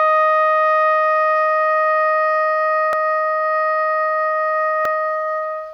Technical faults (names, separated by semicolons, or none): dropped buffer (overrun)